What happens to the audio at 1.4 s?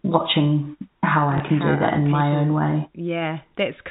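At 1.38 to 1.40 s there is a single burst of packet loss with the last packet repeated. A 20 ms stretch of speech went missing, which fits one lost packet, and the receiver filled the gap by replaying the packet before it. A single repeat like this sounds like a small blip. Unlike a dropout, there is no silent hole. Because only one packet repeats, it never builds into a 50 Hz buzz.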